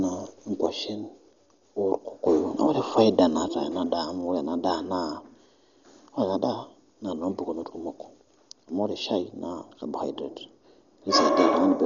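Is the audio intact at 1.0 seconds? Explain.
No. At 1.0 seconds the speech sits inside a one channel drops out event running from 0.66 to 2.26 s. The level falls abruptly by about 6 dB, which is what happens when one stereo channel is likely lost and the mono sum keeps only half of the shared signal. On a waveform this shows as a sudden step down in amplitude at 0.66 s that holds until 2.26 s, then snaps back.

The same moment also carries the dull, band-limited sound of Dolby Digital compression, which runs through the whole clip. The speech has nothing above 6.9 kHz, and a rough, fluttering noise surrounds the voiced tones. This is likely the AC-3 family of codecs working at a starved rate, which fits a bitrate around 40 kbps. At that rate the encoder narrows the band and leaves many frequency lines without mantissa bits, and the decoder fills them with dither noise. On a spectrogram there is a hard ceiling at 6.9 kHz and speckled, blocky noise between the harmonics.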